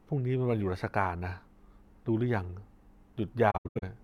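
From 3.50 to 3.84 s, AAC frame loss with muting zeroes lost frames into soft-edged silent gaps, longest about 0.1 s, showing as blank spectrogram columns.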